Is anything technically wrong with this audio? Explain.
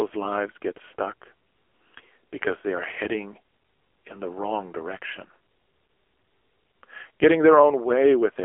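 Yes, the whole clip runs through an AMR narrowband mobile codec. Nothing gets past 3.4 kHz, with the low end thinning below 300 Hz. The speech comes out buzzy and synthetic, its vocal-tract model starved of bits in a way that fits a low 6.7 kbps mode.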